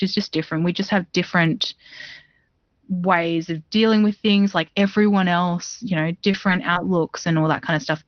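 From 3.22 to 4.88 s there is channel delay (comb filtering): one channel runs roughly a sample late, and summing to mono puts the first notch up near 20 kHz. The result is a faint loss of air, not a hollow, phasey sound. Because it stops at 4.88 s, it is not the fixed 6 kHz ceiling of the Opus call path.

At 5.61 s, just before "you know", a lost packet rebuilt from error correction fills 20 ms with a low-bitrate copy. Further 20 ms rebuilds follow at 6.33, 6.47, 6.75 and 6.85 s. There is no gap, only a brief grainy, noisier patch. That texture separates them from concealment.

Short concealed packet loss hits at 6.31 to 6.35 s, right after "you know", and at 6.73 to 6.77 s. No copy arrived, so the decoder stretched the preceding sound across about 20 ms. It is heard as a momentary smear or wobble rather than as roughness.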